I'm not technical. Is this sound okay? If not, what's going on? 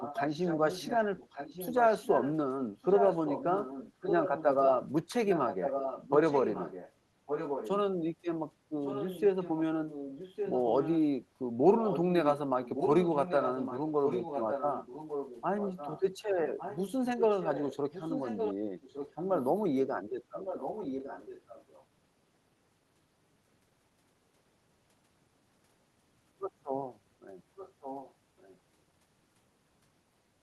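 No. Echo leak: the speech returns about 1.16 seconds late at 0–7.69, 8.82–11.02, 11.79–16.02, 16.58–19.45, 20.33–21.85 and 27.56–28.59 seconds, faintest at the end. This is likely a loudspeaker's sound that the echo canceller failed to remove.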